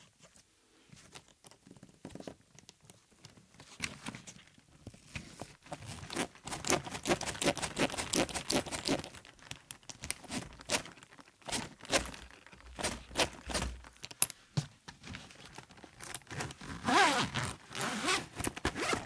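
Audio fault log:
No faults detected in this recording of sounds.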